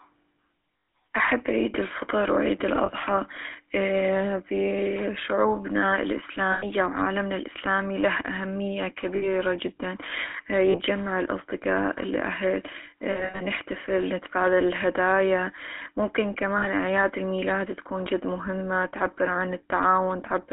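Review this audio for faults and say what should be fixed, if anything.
The speech is coded with the GSM full-rate codec throughout. It has a buzzy, gravelly roughness, and the band stops at 3.5 kHz. The codec models the vocal tract and drives it with sparse pulses. The damage is plainly audible, which fits 13 kbps. Use a wideband codec to prevent this.

Lost GSM frames occur at 0.72–0.88, 2.86–2.91, 6.52–6.66, 9.16–9.28, 10.70–10.76, 13.12–13.42 and 16.58–16.69 s. Each gap is filled by repeating the last good frame. That gives a rough, metallic ring. The worst loss runs about a tenth of a second unbroken. A cleaner link or jitter buffering would prevent this.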